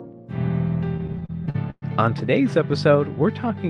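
Between 0.97 and 1.84 s, packets reached the receiver late or more slowly than playback consumed them, so the jitter buffer kept draining and the receiver had to fill the holes itself. It did so ten times, stretching the last sound to cover about 266 ms, roughly a third of that stretch, with the longest fill at 119 ms. No audio is lost, but the passage drags and stutters, with the last sound held where it stalls and fading in the longer waits.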